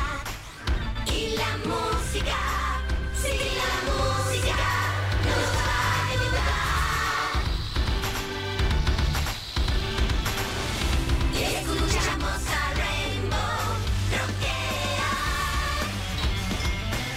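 From 3.40 s to 12.14 s the audio has a doubled audio track. A second full-band copy runs about a tenth of a second behind the original. It is about as loud as the first. The copy has no decay and no room colour, so it sounds like a hard, slapping repeat rather than an echo. It cuts in and out abruptly at both ends. The likely cause is the same signal reaching the mix twice through a slower second path.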